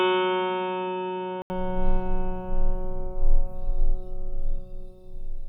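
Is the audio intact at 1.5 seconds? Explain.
No. From 0 to 1.5 s the music is dull and boxy, with nothing above 3.8 kHz, quieter by roughly 10 dB, and carries a faint extra noise floor. An 80 ms silence marks the switch back. The likely cause is an input switched to a poorer, narrower-band device.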